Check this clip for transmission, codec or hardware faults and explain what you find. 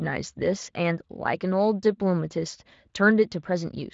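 Listening through the recording, nothing stood out that would point to a transmission, codec or hardware problem.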